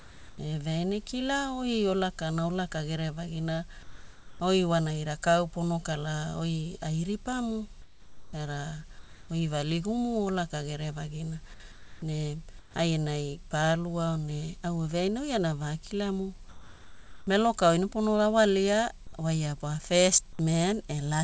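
Speech in which the pauses at 0.0–0.38, 3.83–4.40, 7.82–8.33 (between "kala oi ai ripamu" and "era oi"), 8.99–9.29, 11.72–12.02, 12.59–12.74 and 16.49–17.27 s turn flat and featureless. The level shifts by no more than about 5 dB. This is comfort noise in place of the background, likely from discontinuous transmission filling silences with synthetic noise.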